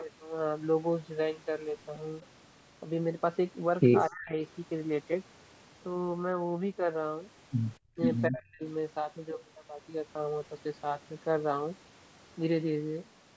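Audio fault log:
4.07–4.34 s, 7.78–8.00 s, 8.28–8.63 s: speech suppressed in double talk. The speech sinks by roughly 35–40 dB in brief gaps, likely an echo canceller ducking its talker while the far side speaks.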